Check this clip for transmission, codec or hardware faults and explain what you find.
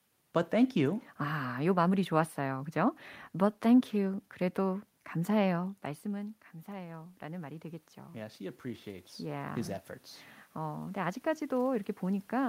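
One fault is present: automatic gain rising, from 5.59 to 9.84 s.

At around 5.5 s the talker moves away from the microphone and the input drops by about 15 dB. That move is not itself a fault. The automatic gain control then reads the input as too quiet and raises its gain by about 8 dB over roughly four seconds. Voice and room noise swell together, and the level ends about 7 dB below where it began. On a waveform, the envelope falls, then climbs slowly as a ramp. On a spectrogram, the background noise floor brightens across all frequencies along with the voice.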